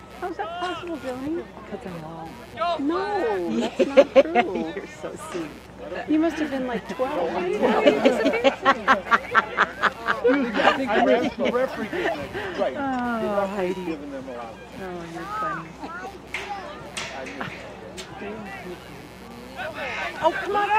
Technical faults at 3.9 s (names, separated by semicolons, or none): computer activity noise